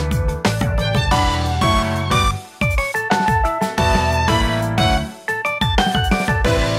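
No technical faults can be heard anywhere in the recording.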